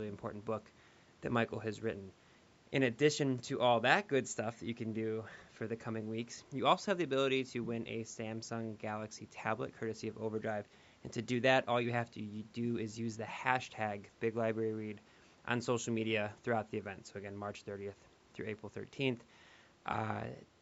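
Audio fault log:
Nothing stood out on listening to the speech, which carries the usual trimmed low end of call microphone processing.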